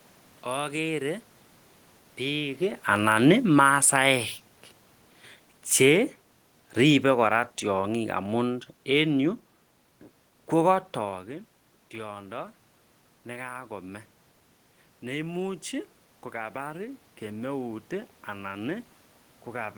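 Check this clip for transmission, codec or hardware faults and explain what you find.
The speech clip has automatic gain control faults: two downward gain corrections and one upward correction near the end.

Automatic gain falling occurs from 2.89 to 4.21 s and again from 5.70 to 9.42 s. The gain control judged the input too loud and pulled its gain down gradually, by about 3 dB in the first event and about 4 dB in the second. You can hear the level sink over each span. The room noise drops with the voice, which shows the change is in the processing and not at the source.

Automatic gain rising runs from 15.7 s to the end of the clip. Here the control judged the input too quiet and raised its gain step by step over about four seconds. Voice and room background swell together in a slow ramp instead of a sudden jump. That shared rise of voice and background is what separates it from the talker moving, heard at about 2.5 s and about 11 s, where only the voice changes level.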